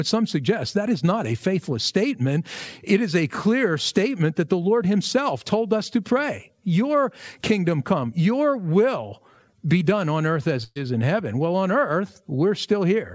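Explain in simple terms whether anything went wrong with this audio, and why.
A burst of packet loss hit at 10.64 to 10.78 s, so about 120 ms of speech never arrived. After "done on earth as", the receiver stretched the last sound to fill the gap, fell briefly silent, then resumed at "is in heaven".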